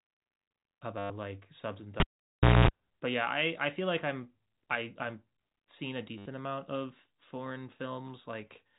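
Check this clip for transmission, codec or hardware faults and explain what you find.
Two kinds of fault occur in this speech clip: packet loss with the last packet repeated, and a cable pulled and plugged in. The telephone-band G.711 coding underneath is audible only as a 4 kHz ceiling.

From 0.98 to 1.10 s and from 6.18 to 6.26 s, packet loss with the last packet repeated cuts in. The receiver replays its final good packet. The runs buzz near 100 Hz, which fits 10 ms packets. The result is a brief robotic stutter.

From 2.00 to 2.68 s, a cable is pulled and plugged in. A pop opens a gap of about 0.63 s. During it, a 60 Hz mains buzz lasts about 0.23 s while only the plug tip touches. A second pop marks the sound's return.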